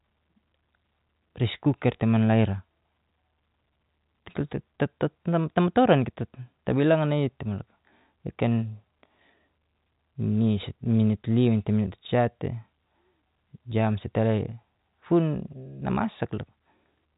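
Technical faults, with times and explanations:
Nothing stood out on listening to this speech, which comes through the G.711 telephone coding with only its expected narrow band.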